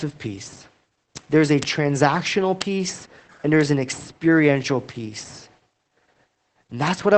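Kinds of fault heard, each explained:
Opus voice compression: The whole recording passes through Opus in its SILK speech mode at about 12 kbps, which points to a wideband setting with nothing above roughly 8.5 kHz. The missing top end and coarsely coded excitation make the speech muffled, slightly hoarse and faintly robotic, and the damage is plainly audible throughout. Unlike a simple low-pass filter, this adds a synthetic, buzzy roughness to the voice, not just dullness.
Bit error spike: Two isolated sharp ticks land at 1.63 s, right after "there's a", and at 2.62 s. Each comes from a flipped bit that throws two or three consecutive samples off by a power of two before the signal snaps back. The tick is broadband and has nothing to do with the speech around it. That sets it apart from codec artefacts, which follow the signal, and from dropouts, which leave a gap instead of a click.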